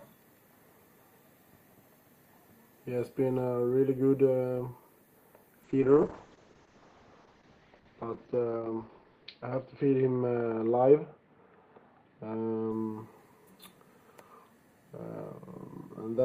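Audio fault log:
5.65–12.77 s: call bitrate drop. The top end narrows to 6 kHz and the sound coarsens, pointing to roughly 32 falling to 7 kbps; clearing by 12.77 s distinguishes it from fixed filtering.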